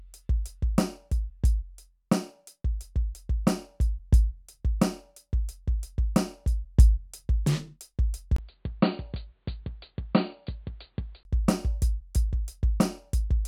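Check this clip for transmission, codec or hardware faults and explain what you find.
One fault turns up in this music clip: from 8.36 s to 11.25 s the sound abruptly goes dull and boxy, with nothing above 4.6 kHz, drops about 5 dB in level, and picks up a new background noise roughly 45 dB below the music. A brief 20 ms silence sits at the switch. The likely cause is an input switched to a poorer device, such as a headset's call profile. A codec narrowing its bandwidth would cut the top end too, but it would not bring a new noise floor, a level change or a gap.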